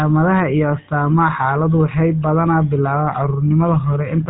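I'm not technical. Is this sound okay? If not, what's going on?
No. From start to finish this speech has passed through the GSM full-rate codec, the compression used by early mobile phones. It rebuilds the voice from a simple model driven by evenly spaced pulses, which adds a buzzy, gravelly roughness that is plainly audible here. Nothing above about 3.9 kHz survives, so the sound is also dull. A simple telephone filter would sound equally narrow but smooth; the grainy buzz points to this codec.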